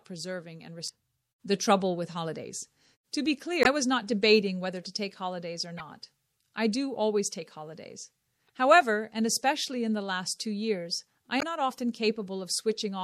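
MP3 compression runs through the whole clip: the top end sounds watery and swirly, with weak detail flickering in and out. The likely cause is an encoder starved of bits, which fits a low bitrate of about 64 kbps.

Damaged data in a compressed stream appears at 0.85 to 0.90 s, 3.62 to 3.66 s, 5.77 to 5.81 s, 8.45 to 8.51 s and 11.38 to 11.43 s. Each is a brief chirp, squawk, click or short hole lasting roughly 30 to 50 ms, where the decoder misread corrupted frames and lost sync before locking onto the next valid frame header.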